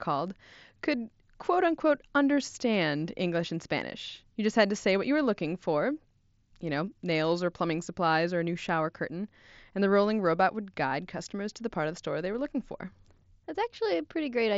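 No faults in this speech clip; the band tops out around 8 kHz, with a faint graininess on louder passages, as expected from a wideband mSBC Bluetooth headset link.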